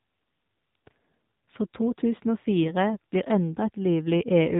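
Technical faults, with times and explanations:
Throughout: AMR narrowband mobile codec. The speech is confined to the telephone band, with nothing above 4 kHz, which points to 8 kHz sampling. The plainly audible buzzy, synthetic edge comes from the codec rebuilding the voice from a vocal-tract filter driven by a sparse pulse excitation in 20 ms frames. The coarseness of that excitation fits one of the lower AMR-NB modes, around 7.4 kbps.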